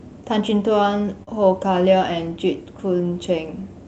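At 1.23 to 1.29 s the speech briefly smears and wobbles, a short blur where the sound carries on too smoothly before blending back into place. This is short concealed packet loss. About 40 ms of the call reached the decoder too late, and the receiver covered the gap by extending the preceding sound, from its pitch where voiced and as shaped noise where not, then blending back into the real audio. The surrounding audio passed through a call codec whose top end stops near 8 kHz.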